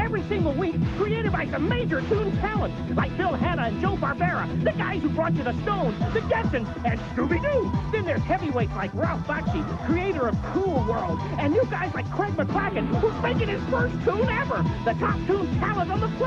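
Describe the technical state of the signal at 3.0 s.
At 3.0 s the signal is intact, with no dropout, clipping, glitch or other fault at that point.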